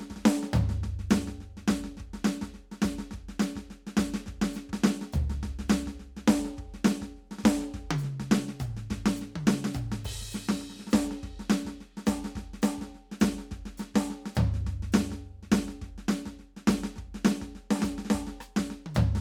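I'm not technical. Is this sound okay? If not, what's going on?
Yes, this music has no technical faults to report.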